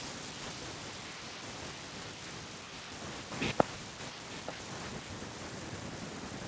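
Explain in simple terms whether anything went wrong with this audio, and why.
Between 4.21 and 4.54 s there's an echo leak: a delayed copy of the speech, nearly 0.9 s late and about as loud as the original, slips back in. Likely the far end was on a loudspeaker and its echo canceller missed some of what its microphone picked up.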